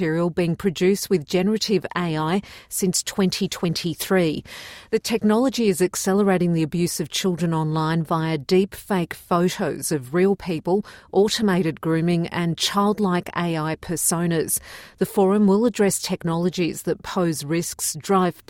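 Clock drift between sender and receiver runs through the whole recording: the sender's clock is fast by around four percent, so the receiver's buffer keeps overfilling instead of dropping out. From 0.05 to 18.26 s, repeated timing corrections trim tiny pieces to keep pace, giving an effective speed of 104 percent and faint, unevenly spaced hiccups, all shortening, unlike the smooth pitch wobble of wow and flutter.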